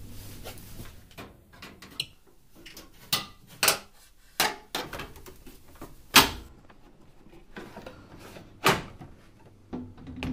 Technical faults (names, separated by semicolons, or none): de-emphasis applied wrongly